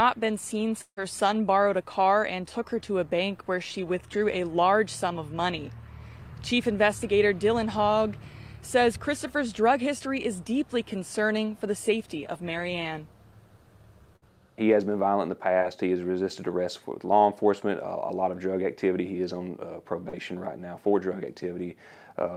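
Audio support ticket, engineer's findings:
0.81–0.99 s: sound continues as a decaying buzz/hiss for about 150 ms, then roughly 60 ms of silence before audio resumes further on, about 160 ms skipped. Likely a long network dropout with receiver concealment exhausted. Unlike shorter losses, the fill dies out into a hard silent gap.

14.16–14.24 s: burst of packet loss. About 60 ms of audio never played. Jitter buffer/decoder extends the last sound and attenuates it across the gap, so the audio resumes later. Longer, audibly fading fill distinguishes it from single-packet concealment.

9.99–10.02 s, 15.60–15.63 s, 20.09–20.15 s: short concealed packet loss. About 20, 20 and 40 ms missing respectively. Decoder PLC bridges each hole with a continuation, then crossfades back. Heard as a brief smear or wobble, unlike the burst at 14.16 s.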